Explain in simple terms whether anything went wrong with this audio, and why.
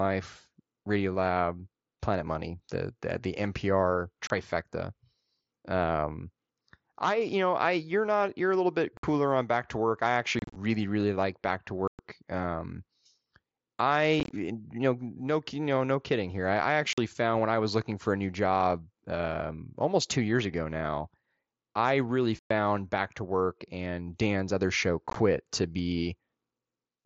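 The speech carried over the Bluetooth mSBC headset link drops out eight times with unconcealed Bluetooth headset packet loss: at 4.27 s, 8.97 s right after "you're a little bit", 10.39 s just before "really like", 11.88 s, 14.2 s, 16.93 s, 22.39 s, and 25.08 s after "other show". Small voice packets between headset and phone went missing, and nothing filled the gaps. That leaves abrupt silent holes of up to 112 ms. Around 10.4 s, 14.2 s and 25.1 s the losses come in scattered bursts, which sound choppy and crackly.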